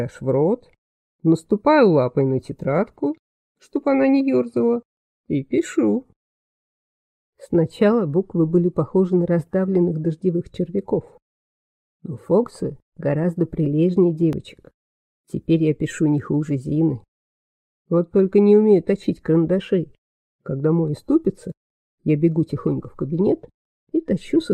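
At 14.33 s there is a small jump in the sound. About 10 ms of audio is missing, with no gap of silence. This is likely a dropped buffer (overrun): the hardware overwrote samples before the program collected them, splicing both sides together.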